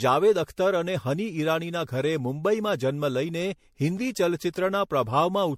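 Generation loss runs through the whole speech clip. The sound is swirly and hollow, with smeared consonants and blurred attacks. Nothing is heard above 16.5 kHz. The damage is heavier than a single MP3 pass would leave at a rate that seems to be around 64 kbit/s. The likely cause is repeated decoding and re-encoding, perhaps about seven times. Each pass quantises on a shifted frame grid, so noise and spectral holes accumulate.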